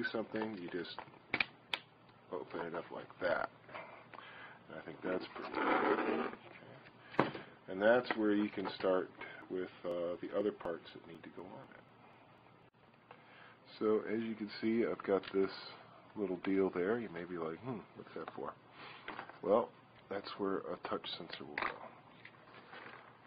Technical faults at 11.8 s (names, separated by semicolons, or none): periodic USB or driver dropouts